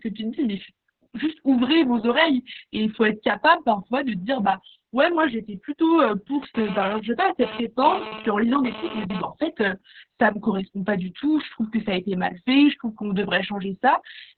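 Speech runs for the full clip with heavy Opus voice compression throughout. The sound is muffled and hoarse with a faintly robotic buzz, which fits the SILK linear-prediction coder in narrowband mode at a very low rate, around 6 kbps, with long frames such as 60 ms. On a spectrogram, energy stops at about 4 kHz. Below that, harmonics look smeared and grainy from the coarse excitation coding.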